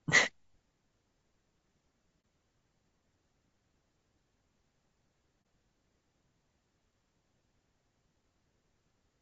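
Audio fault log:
throughout: low-delay AAC compression. The speech sounds rough and grainy, with a hiss-like texture between the pitch harmonics and a thin, somewhat artificial top end. This is likely low-delay AAC coding, whose very short frames resolve harmonics poorly, and the damage fits a bitrate around 32 kbps.
2.21–2.24 s and 5.42–5.45 s: AAC frame loss with muting. Each is a brief, soft-edged dropout of about 30 ms. The decoder lost a frame and zeroed its spectrum, so the overlapping windows fade the sound out and back in.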